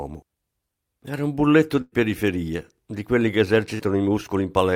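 After "un bulletto" at 1.81 s, a fading held buzz stands in for about 0.2 s, and again briefly after "di quelli che" at 3.74 s. Each is a burst of packet loss: the receiver stretched the last sound over the gap, and roughly 100 ms and then 40 ms of speech were skipped.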